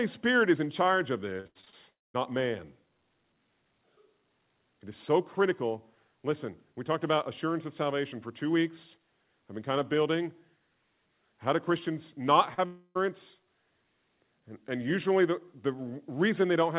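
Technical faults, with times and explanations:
1.40–1.74 s, repeated packet loss (robotic sound): right after "is in charge of", the speech breaks up into a choppy stutter with pieces missing. Five separate gaps arrive within about a third of a second. The longest is 80 ms, and together they remove about 180 ms of real audio. Each hole is bridged by stretching the previous pitch period, so a little over half of this span is synthetic repetition. On a spectrogram the harmonics turn rigid and comb-like, repeating in short blocks. The waveform shows identical cycles looped and then cut off.
1.90–2.16 s, long network dropout: about a quarter second of audio is missing. This sounds like a likely network outage rather than a gap in the speech. The last sound is carried on briefly as a fading buzz or hiss, and then roughly 200 ms of near-silence follows before speech resumes, with the missing stretch never recovered. 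On the waveform the amplitude decays into a flat line. The spectrogram shows a smeared tail of the prior spectrum dissolving into an empty band, followed by an abrupt onset where real audio returns.
12.54–12.60 s, short concealed packet loss: about 40 ms failed to arrive and was filled from the preceding sound, which gives a brief smear or wobble instead of a clean transition. A spectrogram shows a short patch where the frequency content freezes or blurs and then rejoins the live signal. In the waveform a few repeated, slightly damped cycles sit between the normal ones, with a soft blend at each edge.
12.66–12.97 s, long network dropout: about 300 ms of audio is lost, which is again a likely network outage. This time the concealment fills almost the whole gap. What is heard is an extended continuation of the last sound, as a buzz or hiss that slowly loses shape, with only about 20 ms of true silence before the speech comes back, and the missing portion does not return. 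On a spectrogram the harmonics stretch on unnaturally and fade. The waveform shows a long, repetitive, decaying segment ending in a brief flat gap.
The call path's G.711 A-law coding at 64 kbps is audible as a hard ceiling, with nothing above 4 kHz, which appears on a spectrogram as an empty region above that line.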